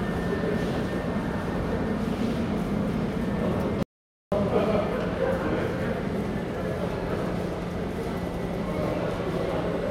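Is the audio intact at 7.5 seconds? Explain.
Yes, the audio is intact at 7.5 seconds, with no fault heard at that point.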